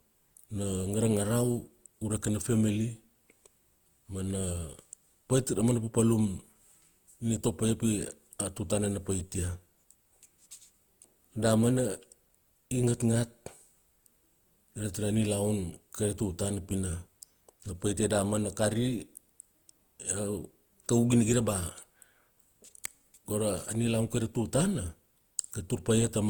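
From start to finish the speech sounds swirly, smeared and hollow, with blurred attacks. This is generation loss, likely from repeated lossy coding. It fits Opus at around 48 kbit/s applied about three times, each pass adding fresh quantisation noise.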